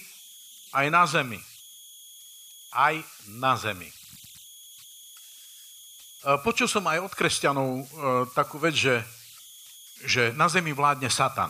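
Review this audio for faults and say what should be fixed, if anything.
Converter idle tones run throughout the speech: a whistle around 3 kHz sits in the pauses and turns into grainy noise under quieter passages, at about -23 dB relative to the signal. An undithered delta-sigma converter settles into repeating bit patterns on small inputs, producing these offset-dependent tones. Adding proper dither at the converter, or using one with built-in dither, would prevent it.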